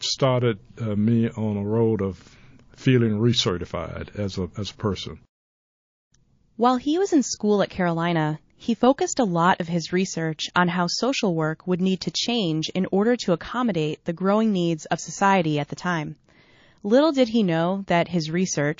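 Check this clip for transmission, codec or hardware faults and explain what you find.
The clip shows one fault, running throughout: plainly audible MP3 compression damage, likely from MP3 encoding at a low bitrate around 32 kbps. Short of bits, the encoder drops the treble above a fixed cut-off and zeroes weak frequency lines that flicker on and off between frames, so the speech sounds watery and swirly, with metallic chirps on s sounds and smeared attacks. A spectrogram shows a hard ceiling on the high frequencies and speckled, patchy holes below it.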